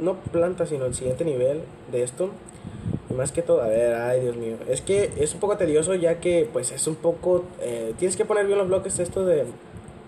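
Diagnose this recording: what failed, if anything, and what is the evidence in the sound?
Nothing here points to a failure at any stage, so there's nothing to diagnose in this one.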